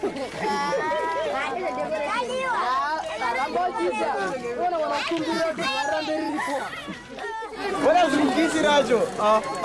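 Nothing stood out as a technical problem on listening to the clip.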